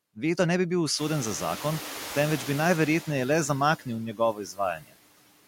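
A speech clip where the background sinks in the gaps and rises under the voice throughout. These are noise suppressor artifacts: the suppressor pulls down bands it judges to be steady noise, about 18 dB at full strength, frame by frame. Right after "ne bi bil", at about 1.0 s, the room noise jumps by about 24 dB and comes through with less reduction from 0.98 to 2.81 s before fading down. This is the noise suppressor catching up: its noise estimate lags the sudden rise, so it cuts only about 5 dB at first and takes about 1.8 s to adapt. Later, parts of the speech turn faint and swallowed from 4.13 to 4.59 s and again from 4.76 to 4.94 s, dropping by as much as about 17 dB for roughly a third and a sixth of a second. This is speech cut by the noise suppressor, which mistook those quieter parts of the speech for background noise.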